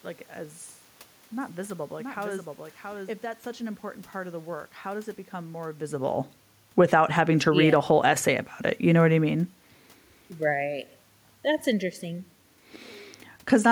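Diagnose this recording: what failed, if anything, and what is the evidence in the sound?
Two copies of the capture path appear to have been summed, most likely because the same signal arrived a second time through a slower route in the capture or call-processing chain. From 1.41 s to 3.61 s, ending just before "an important part of", a doubled audio track runs under the original, roughly 5 dB quieter and trailing by about 0.7 s. The copy is full-band, with no reverberant tail, and it starts and stops abruptly.

In call processing, the automatic gain control judged the input too quiet and raised its gain. Between 7.01 s and 8.27 s, leading into "about it", the level climbs by about 4 dB. The voice and the room noise beneath it swell together over that second and a quarter, so this automatic gain rising comes from processing and not from the talker. The level shift near 5.5 s, by contrast, matches the talker moving relative to the microphone.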